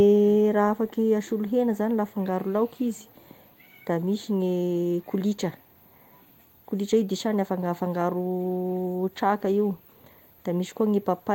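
Nothing in this speech recording stands out as a technical problem; it comes across as a steady, ordinary take with nothing to flag.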